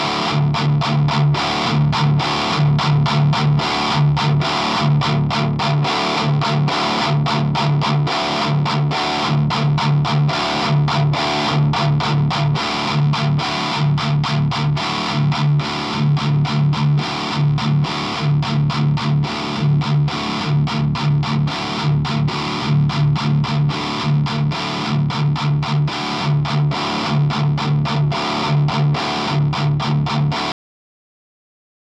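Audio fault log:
30.52 to 31.89 s, cut-off end: the sound stops dead in mid-event at 30.52 s because the final buffers were never written or played, leaving about 1.4 s of digital silence with no decay. The waveform falls straight to silence, and the spectrogram goes abruptly blank at every frequency.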